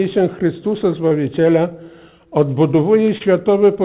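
Short concealed packet loss shows up twice: around 1.08 to 1.17 s, where about 20 ms of missing audio got patched over with about 25 ms of fill, and again near 3.18 to 3.22 s with about 20 ms filled. Each time the receiver stretched the last bit of sound across the gap, so you hear a quick smear or wobble, all within the G.711 call's 4 kHz bandwidth.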